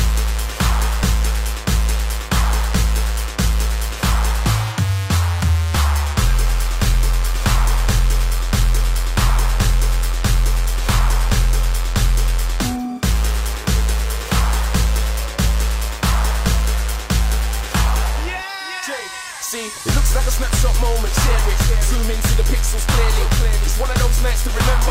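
No faults detected across the whole recording.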